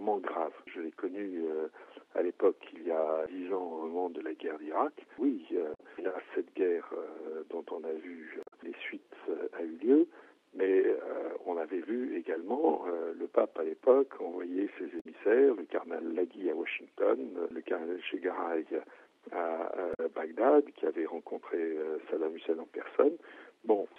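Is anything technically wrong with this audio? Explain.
Yes: damaged data in a compressed stream breaks decoding at 5.74, 8.43 (adding 12 ms), 15.00 and 19.93 s; the decoder loses frame sync, producing brief disruptions of about 70 to 110 ms.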